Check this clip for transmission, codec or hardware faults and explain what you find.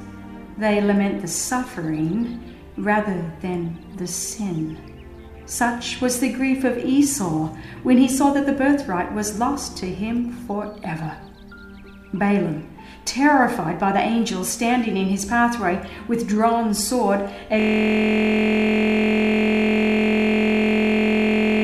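There is one hardware-level fault: a system hang loop from 17.60 s to the end. The computer or driver froze while the sound hardware kept replaying the same 23.22 ms stretch of its buffer, which fits a 1024-sample buffer. That piece repeats about 170 times as a steady buzz at 43.1 Hz.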